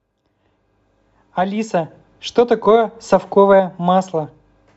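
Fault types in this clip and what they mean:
No faults are audible.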